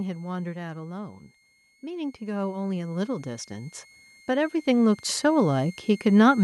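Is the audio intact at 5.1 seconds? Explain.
No. At 5.1 seconds the speech and its background are still swelling upward together, part of an automatic gain rising that runs from 0.99 to 6.39 s and adds about 18 dB in total. The gain control judged the input too quiet and kept raising its gain gradually.

A thin, steady whistle around 2 kHz, drifting between 2.1 and 2.19 kHz, sits well below the speech there, as it does throughout. This is switching supply whistle, from a power supply switching at an audible rate.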